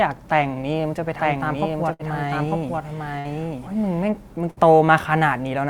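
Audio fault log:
1.03 to 4.10 s, doubled audio track: a second copy, roughly a second late and about 5 dB down, cuts in and out abruptly, likely a slower duplicate capture path.
1.93 to 2.02 s, 3.19 to 3.28 s and 4.51 to 4.60 s, burst of packet loss: each time roughly 60 ms vanishes, papered over by a fading held buzz or hiss before the sound jumps ahead.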